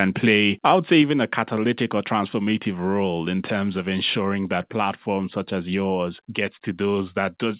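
At 1.02 s, between "would say" and "a catalytic or transformative", the speech and background drop together by about 3 dB in one step. This is likely a microphone volume stepped down by the call software, which lowered the input gain once.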